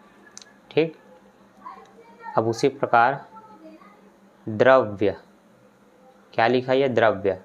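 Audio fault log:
No faults detected anywhere in the clip.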